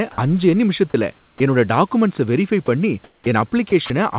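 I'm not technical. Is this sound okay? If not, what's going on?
No, there are a few glitches, and they all probably come from the part of the call software that decides when someone is talking and stops sending when it thinks they aren't.

Sound dropped by the voice detector: at 0.12 to 0.18 s and again at 2.66 to 2.68 s, a tiny slice of speech vanishes and is replaced by a bit of hiss.

Sound chopped by the voice detector: from 0.9 to 1.4 s and from 3.7 to 3.9 s, the speech stutters as sending switches off and on.

Comfort noise in place of the background: from 3.04 to 3.26 s, the real room sound is swapped for a flat, slightly quieter artificial hiss that fills the gap.

Onset clipped by the voice detector: right at 3.24 to 3.26 s, the speech that resumes starts abruptly because its first split second was never sent.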